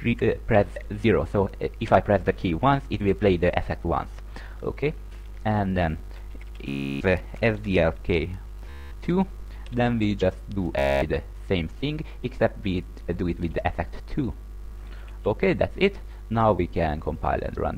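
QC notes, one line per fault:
6.69–7.01 s, 8.70–8.92 s, 10.79–11.02 s: Bluetooth stutter. Late or lost packets make the receiver replay its last short buffer, giving a buzzing machine-gun repeat for about 0.32, 0.22 and 0.23 s. Unlike a silent dropout, the gap is filled. Afterwards the sound resumes further on, so that stretch is missing.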